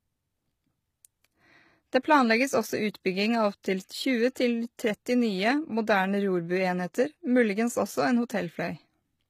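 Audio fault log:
Throughout: HE-AAC compression, likely the cause of the plainly audible codec damage. The upper band sounds synthesised rather than captured, with s sounds turning gritty and metallic where copied harmonics misalign, which fits a bitrate near 20 kbps.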